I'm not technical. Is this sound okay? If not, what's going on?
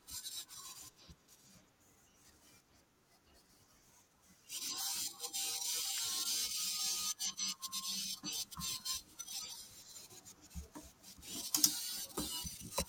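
No. At about 5.98 seconds there's an electrical switching spike: something nearby, likely a switch, a motor or a small static discharge, threw off a tiny burst of electrical energy that leaked into the audio cable or equipment. In the recording, that shows up as a quick snap laid on top of the speech. It's over in a split second and fairly faint, so it's a small tick rather than a loud crack.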